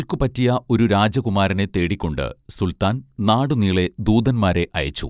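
No dropouts, clicks, distortion or level jumps turn up anywhere in the speech, and nothing in it needs flagging.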